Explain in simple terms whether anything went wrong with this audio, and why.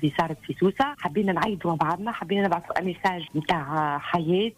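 A bit error spike occurs at 1.08 s. One digital bit was flipped in storage or transmission, so for just a couple of samples the waveform jumped sharply and then snapped back. You hear it as a single brief tick that has nothing to do with the surrounding audio.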